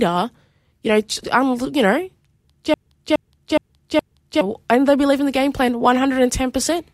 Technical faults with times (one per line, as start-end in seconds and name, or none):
2.74-4.41 broken-record loop